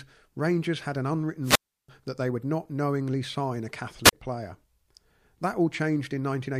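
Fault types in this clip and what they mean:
wireless microphone squelch dropout: the radio link faded until the receiver's squelch muted it, leaving near-silent gaps of 333 ms after "had an" and 36 ms after "not knowingly sign a".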